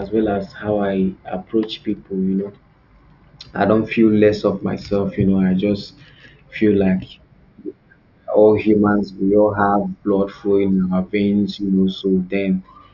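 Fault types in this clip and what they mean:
No technical faults are audible.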